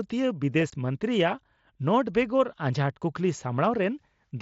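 Unconcealed Bluetooth headset packet loss at 0.70 to 0.73 s: 22.5 ms of speech, likely three frames, never arrived and was replaced with silence or an idle pattern, leaving an abrupt gap.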